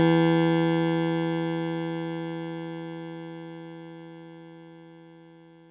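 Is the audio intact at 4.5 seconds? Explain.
Yes, the music plays through 4.5 seconds with no dropout, click or other fault at that moment.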